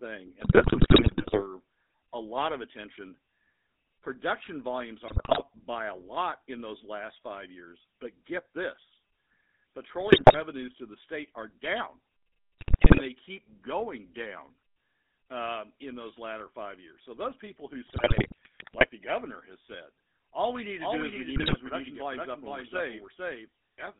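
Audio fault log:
Throughout: GSM full-rate codec. The speech is band-limited to roughly 200 Hz to 3.6 kHz and carries a buzzy, gravelly roughness. A coarse pulse-driven vocal-tract model rebuilds the voice, which fits the 13 kbps GSM full-rate codec.
0.40–1.45 s, 5.08–5.41 s (just before "by a lot in"), 10.10–10.36 s, 12.59–13.02 s (between "the state are down" and "they keep going down"), 17.85–18.86 s, 21.36–21.56 s: GSM bit errors. Corrupted decoder parameters warp the spectrum and jolt the level, so the speech squawks, pops and gargles.
20.80 s to end, starting after "said all we need": doubled audio track. A second full-band copy trails about half a second behind, about 5 dB quieter, with no room colour, and it begins abruptly. The likely cause is a second capture path or a misaligned edit.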